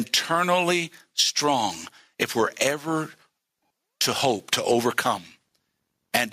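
Gain pumping runs through the whole speech clip. The level is pulled down each time a loud syllable arrives, with swings of around 15 dB. The likely cause is input gain set far too high, with a fast limiter or compressor clamping it on each peak. On a waveform the envelope looks flattened and blocky. On a spectrogram the noise floor brightens between phrases and darkens under them.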